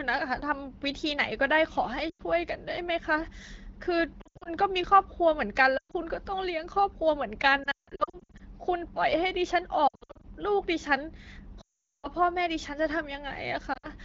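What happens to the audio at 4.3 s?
Around 4.3 s the speech breaks up from lost AMR speech frames, between 4.21 and 4.48 s. About 180 ms of audio goes missing in gaps scattered over 240 ms, which fits roughly nine 20 ms frames failing their checks. The decoder fills each gap by repeating the last good pitch and vocal tract settings at falling gain. Short losses sound like quick dips or a warble. The longest run, 80 ms, drops the sound to near silence within two frames.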